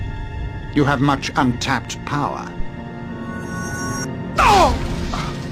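At 1.51 to 1.56 s there's a short smeared, noisy patch, and it comes back at 5.13 to 5.20 s. That's AAC frame loss with concealment. The gap is about 43 ms, which fits a single dropped frame each time. The decoder papers over the hole by reusing the last good spectrum with its phases scrambled, so you get a brief phasey blur instead of a dropout. Neither loss runs long enough to fade toward silence.

In between, at 2.60 to 2.71 s, there's a phantom power thump, a deep low-frequency knock that dies away in about 25 ms. Someone switched the supply on or off while the input was live. That sudden DC step pushes through the coupling capacitors and hits the preamp as one low bump. Here it's quick and tight rather than a long rumbling tail.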